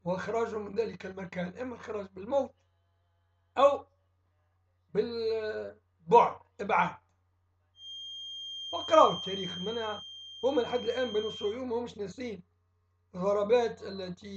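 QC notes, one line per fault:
7.73–11.60 s, feedback whistle: the loudspeaker-to-microphone loop was likely sitting just at the edge of feedback, so a single frequency near 3.2 kHz kept recirculating and sustaining itself without building into a full howl. It comes through as a thin, steady tone roughly 15 dB under the main sound, swelling and fading slowly in level as the loop gain drifts. It sits behind everything else for nearly four seconds before dropping away.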